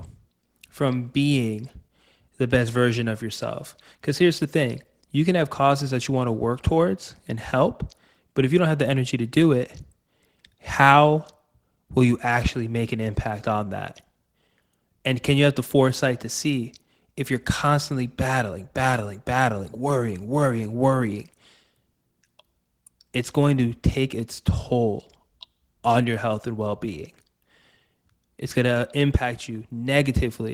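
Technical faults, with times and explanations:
No technical faults can be heard anywhere in this speech clip. Nothing in the audio calls for a timed entry.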